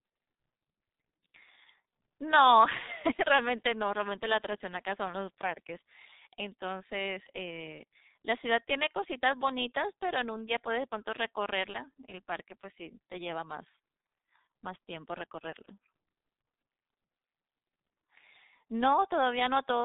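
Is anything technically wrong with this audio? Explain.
Yes. Throughout the speech, the G.723.1 codec is audibly at work. Nothing survives above 3.8 kHz, so it sounds muffled, and slow 30 ms frame updates leave it hoarse with smeared consonants, consistent with roughly 6 kbit/s. A spectrogram shows a hard ceiling at 3.8 kHz and blocky, smeared formants.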